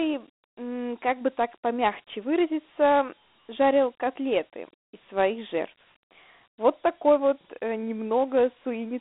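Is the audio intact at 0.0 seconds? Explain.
No. Dialogic VOX ADPCM runs throughout, including 0.0 s: coarse 4-bit step coding, fitting about 32 kbps, adds gritty hiss, and the sound is band-limited to 250 Hz to 3.6 kHz.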